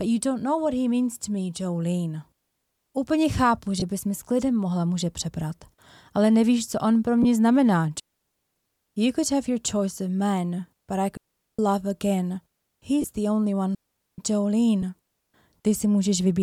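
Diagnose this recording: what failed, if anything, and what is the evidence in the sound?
Lost LE Audio frames at 3.80, 7.23, 13.02 and 14.82 s, at the codec stage on the Bluetooth link. Each is a brief smeared, noisy blip of about 20 ms (10 ms at 14.82 s), which fits lost 10 ms LC3 frames. The decoder refilled the gap by repeating the last spectrum with randomised signs.

Digital wireless dropout at 8.00 to 8.56 s, 11.17 to 11.59 s and 13.75 to 14.18 s, on the wireless link, lasting roughly 0.4 to 0.56 s. Each is a clean hole of near silence with no noise burst on either edge. The receiver lost too much data and muted with a very short fade.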